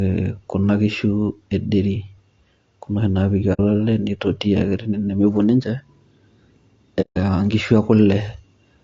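A speech clip with plainly audible codec damage throughout. The voice sounds rough and grainy, with noise filling the gaps between harmonics and a thin, synthetic top band. This is likely low-delay AAC compression, such as AAC-ELD, running at a low bitrate around 32 kbps. There are two instances of AAC frame loss with muting. The sound fades out and back in, leaving soft-edged holes. The first runs from 3.53 to 3.60 s and fits two lost frames. The second, from 7.01 to 7.18 s, fits about five.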